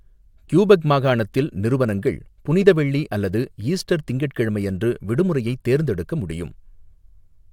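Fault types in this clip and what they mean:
No faults heard here.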